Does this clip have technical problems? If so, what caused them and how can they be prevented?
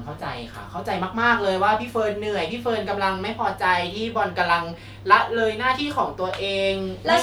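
No, this clip has no technical problems, so there is nothing that needs preventing.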